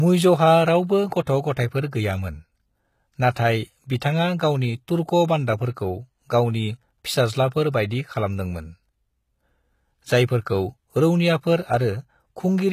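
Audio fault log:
throughout HE-AAC compression: the speech was likely encoded with HE-AAC at a low rate, which fits about 20 kbps. Only the lower spectrum is truly coded, and the treble is rebuilt by copying lower bands upward. Nothing survives above 14.9 kHz, and the codec damage is plainly audible, with gritty, lispy s sounds and treble whose harmonics fail to line up.
4.00 s pre-echo: a sharp attack landed late in a transform block, and the quantisation noise sized for that loud onset was spread across the quiet moment before it. A short hiss of about 14 ms runs ahead of the attack, which sounds softened and smeared.
7.70–7.74 s pre-echo: the same block-wide spreading of coding noise occurs here on a later attack, with a longer spread of about 33 ms. A hiss leads into the onset, and the attack loses its crispness, arriving blurred rather than clean.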